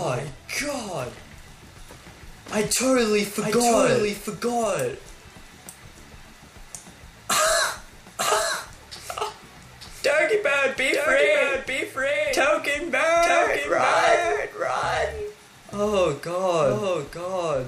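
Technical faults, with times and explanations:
Throughout, doubled audio track: a second, slower capture path likely mixes in a copy, heard as a dry, full-band repeat about a second late and roughly 5 dB quieter.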